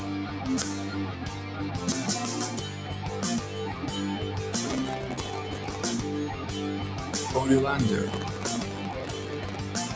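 A noise suppressor built for speech was left running on this sound, mistaking sustained tones and tails for noise, so held parts sink and pump by about 5 dB throughout. From 4.65 to 5.93 s and again from 8.06 to 9.56 s, processor overload crackle occurs: the processor missed deadline after deadline on very short buffers, around 1.5 ms, and replayed scraps of old audio, producing gritty tearing crackle over the sound.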